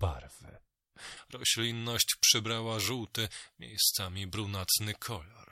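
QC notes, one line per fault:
1.17–5.51 s: pre-emphasis left on. From 1.17 s to the end, the speech turns thin, bright and sibilant, with the treble lifted by about 11 dB at 10 kHz relative to 1 kHz. A high-frequency boost was applied before recording or transmission, and the complementary de-emphasis cut was never applied on playback. The tilt is consistent with a J.17-style curve. The uncorrected lift exaggerates sibilants and air, and the low end sounds weak by comparison.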